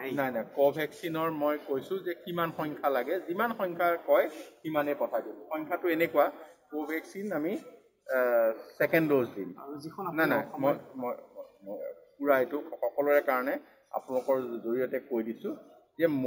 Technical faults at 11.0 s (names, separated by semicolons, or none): imaging from sample-and-hold upsampling